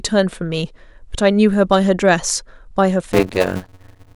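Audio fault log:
3.12–4.15 s, block size mismatch (padded): short blocks, fitting 256-sample writes, are zero-padded into larger reads, causing a 91.9 Hz buzz and speech slowed to 0.533× with its timbre kept.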